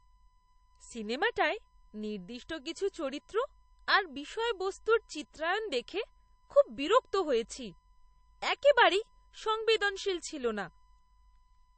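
Throughout the speech a steady USB whine sits at 1 kHz, about 40 dB below the voice, drawn as a thin unbroken horizontal line on the spectrogram. Nothing appears above 8.4 kHz for the whole clip, a flat ceiling with swirly, smeared artefacts, likely low-bitrate MP3 audio later saved at a high bitrate.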